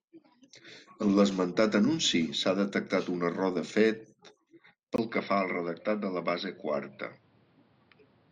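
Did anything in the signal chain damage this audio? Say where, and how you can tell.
Yes. From 4.96 s the speech turns dull and about 5 dB quieter, cut off above 5.6 kHz, after a 20 ms gap, with faint new noise: likely an input switched to a poorer device.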